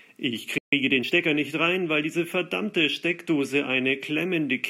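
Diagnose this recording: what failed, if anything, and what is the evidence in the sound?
The speech drops to silence mid-flow from 0.58 to 0.73 s, about 0.14 s. This is a playback stall, likely the player running dry or its thread blocking.

From 0.73 to 1.29 s, before "nicht rein weil diese", speech hurries at 1.25x with unchanged pitch. This is time-compressed catch-up, as the player splices out snippets to drain its backlog.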